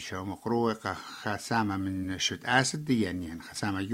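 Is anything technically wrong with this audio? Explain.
Yes. Around 2.03 to 2.05 s and again around 3.55 to 3.58 s, the audio briefly jumps forward. This is compressed frames skipped: whole coded frames never reached the output, so the sound leaps ahead. The first jump loses roughly 40 ms and the second roughly 20 ms, which fits about two and one 20 ms frames.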